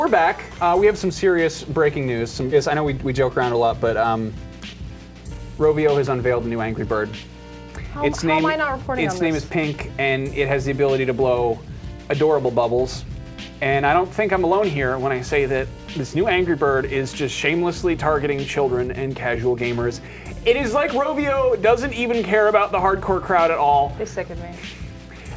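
At 2.52 s the audio jumps forward abruptly, with no silence or fill at the join, as if a piece had been snipped out and the two edges spliced together. This is a skip ahead: roughly 0.4 s of audio was lost, either in transit or discarded by the jitter buffer when it overflowed, while later audio was already queued. Playback simply resumed from that later audio, which also cut the playout delay by about the same amount. Right after, from 2.72 to 3.71 s, the sound runs noticeably hurried at an unchanged pitch, about 109% of normal speed. This is a jitter buffer speed-up. The buffer was still holding more audio than its target, so the receiver repeatedly removed short slices one or a few pitch periods long, about a tenth of a second in total, to bring the delay back down. Throughout, the call path's band limit is audible as a complete absence of content above 8 kHz, which fits a G.722 codec at 64 kbps.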